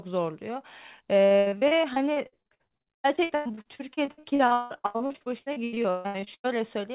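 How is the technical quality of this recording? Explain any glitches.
The recording is marred by heavy, sustained packet loss across most of its length, heard over a narrowband call path with nothing above 4 kHz, which fits G.711 telephone coding.

From 1.26 s to 6.51 s there is repeated packet loss that gives the speech a robotic sound: dozens of short gaps, the longest about 172 ms, each patched by stretching the preceding sound. Nearly half of that span is concealment rather than real audio, so the speech turns choppy. Unlike a single dropout or click, the damage recurs continuously.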